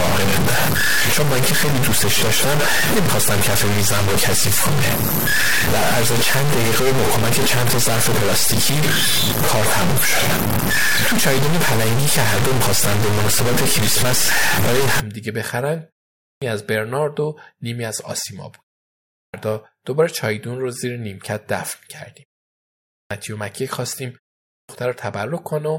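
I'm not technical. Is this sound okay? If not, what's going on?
No. Two different problems can be heard in this speech.

For the first 15 seconds, from 0 to about 15 s, the voice sounds grainy and crunchy. That's most likely low bit depth without dither: the sound was stored with very few volume steps, which fits about 3 bits, and rounded down roughly each time. The grit follows the voice itself and gets worse as it gets quieter. A steady hiss would stay the same in the background.

After that comes clipped start after a pause. At 16.21, 19.12, 22.9 and 24.49 s, speech resumes after a short gap of about 0.4 to 0.7 s, and about 0.2 s of its beginning is missing, so words begin abruptly. The playback device nods off in the silence and wakes too late. The short silences in the pauses don't cut anything off, but at these four points the start of the speech itself is gone.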